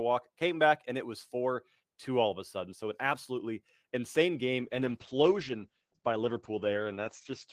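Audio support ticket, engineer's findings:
Call bitrate drop, 4.6 s to end of clip. Speech turns coarse and muffled, top end cut from 20 kHz to 8 kHz. Bandwidth estimate fell, so the encoder got fewer bits. The sound fits about 32 kbps down to 10 kbps. No recovery.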